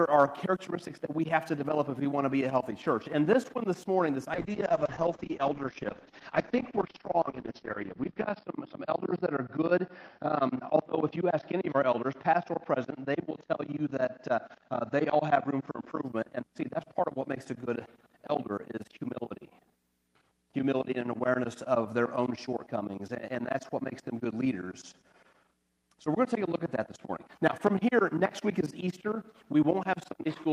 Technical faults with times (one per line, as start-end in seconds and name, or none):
4.35-16.09 call bitrate drop